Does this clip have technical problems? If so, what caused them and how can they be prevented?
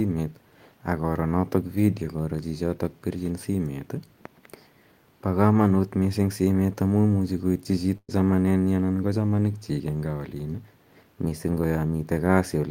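Yes, there's a burst of packet loss from 7.97 to 8.10 s. The receiver stretches the last sound for about 110 ms and fades it down, then picks up again with roughly 120 ms of speech skipped. A larger jitter buffer or forward error correction on the link would help prevent this.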